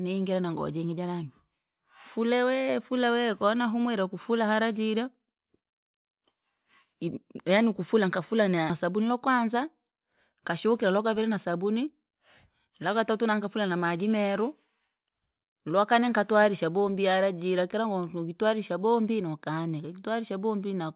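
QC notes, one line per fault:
8.70–8.72 s, skip ahead: right after "yanii ukufula nkafula" playback jumps forward with no gap filled. Roughly a second of speech never plays, and the audio on either side of the cut is butted together almost directly, so the speech lurches abruptly onward. This points to a block of audio discarded in transit or flushed from an overflowing jitter buffer while later audio was already queued, cutting the delay by about a second.
8.84–12.01 s, jitter buffer speed-up: directly after the jump the speech runs about 8% fast at unchanged pitch and sounds hurried. The receiver was holding more audio than its target and trimmed it by repeatedly removing short chunks of one or a few pitch periods, about a third of a second in total over this stretch. The time-compression is heard through the narrowband G.711 mu-law call path, which has nothing above 4 kHz.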